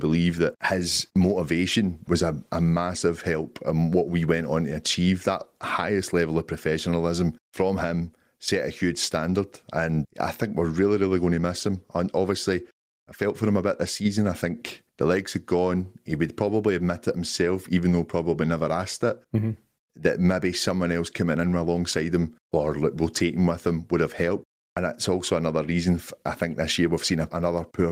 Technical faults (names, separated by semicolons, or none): none